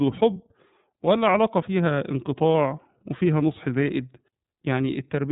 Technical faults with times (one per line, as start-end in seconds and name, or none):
0.00-5.32 iLBC codec
0.33-0.37 lost iLBC frames
2.53-2.55 lost iLBC frames